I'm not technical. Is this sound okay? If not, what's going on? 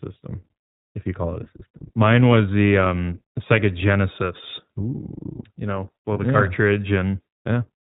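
No. The speech went through the iLBC codec, a phone-call compressor that strips everything above 4 kHz, so the voice sounds muffled, slightly rough and synthetic. At 1.44 to 1.48 s and again at 6.14 to 6.18 s, lost iLBC frames meant the decoder briefly patched the gap, leaving a short buzzy, held sound before speech snaps back.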